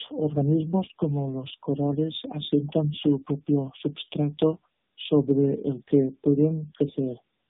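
Speech with tandem speech coding throughout: rough, muffled and warbly, nothing above 3.8 kHz, consistent with about three narrowband AMR coders in a row, each re-coding the last one's output.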